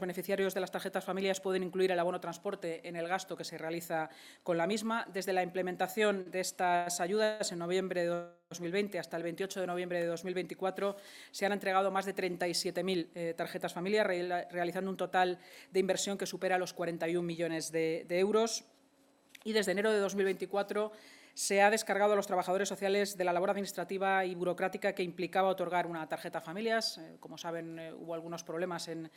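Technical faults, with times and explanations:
6.21–6.28 s, short stall from a late packet: the last sound is held for 44 ms while the jitter buffer waits on a missing packet, then resumes from the same point. It is a brief smear or slight buzz, much shorter than the freezes that follow.
6.76–6.88 s, 7.24–7.42 s and 8.14–8.53 s, call audio freeze: the audio sticks and is continued as a fading buzz for 103 ms, 158 ms and 371 ms, likely because packets were held up in transit. The last one decays into about 30 ms of silence. Playback then picks up where it stopped, so nothing is lost.
12.69–17.22 s, 18.92–19.76 s and 22.98–24.40 s, jitter buffer speed-up: the receiver trims short pitch-period slices to drain built-up delay, so playback runs at 108%, 109% and 107% speed. Roughly 0.3 s is removed in the first stretch and about a tenth of a second in each of the others. The sound hurries but keeps its pitch, unlike a resampling speed change.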